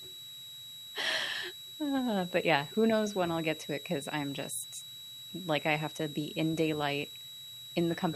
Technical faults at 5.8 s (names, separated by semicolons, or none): switching supply whistle